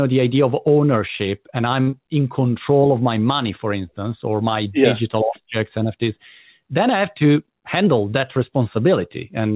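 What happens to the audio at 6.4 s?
At 6.4 s the speech runs on without any dropout, glitch or distortion, carrying only the narrowband sound of the call path, with nothing above 4 kHz.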